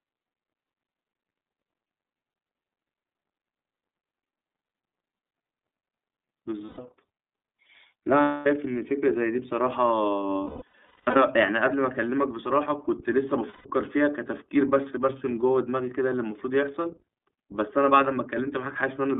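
Throughout, the speech sounds thin, boxy and slightly rough and synthetic, with nothing above roughly 3.5 kHz or below 200 Hz. That is the iLBC codec at work: a narrowband line whose plainly audible coding damage fits its 13.33 kbps, 30 ms frame mode.

At 6.66 s a held, faintly buzzy vowel-like tone fills 120 ms. The same happens at 8.22 s for 240 ms, across 10.44 to 11.17 s in several breaks totalling 540 ms, the longest about a fifth of a second, and at 13.50 s for 150 ms. These are lost iLBC frames. The decoder repeats the last pitch cycle with added noise, and speech recovers immediately afterwards.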